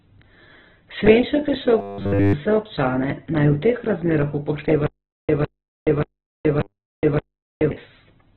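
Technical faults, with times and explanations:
Throughout: Opus compression. Nothing above 4 kHz survives; heavy damage leaves speech muffled, grainy and rough, likely from an 8 kbps narrowband encode.
1.79–2.35 s and 6.61–6.98 s: robotic sound from repeated short buffers. After "je še" and again after "teh razmerah", speech becomes a rigid 100 Hz metallic buzz, likely from 10 ms fragments repeated.
4.87–7.71 s: stutter with silent gaps. After "teh razmerah", a 156 ms burst returns five times every 581 ms, with 424 ms of silence between, likely a stalling stream.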